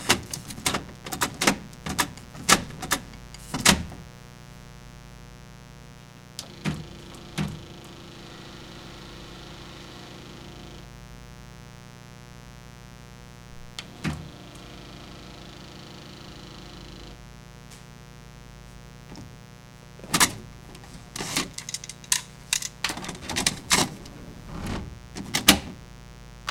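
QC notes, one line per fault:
Throughout, mains buzz: a steady, raspy buzz sits under the sound at roughly 15 dB below it, built on a 60 Hz fundamental. Its edge comes from sharp current spikes, two per mains cycle, which a dimmer, a rectifier or an unshielded line couples into the signal path. Because each spike is so abrupt, it fills in a long ladder of 60 Hz harmonics stretching up into the kilohertz range, which turns a simple hum into a harsh buzz.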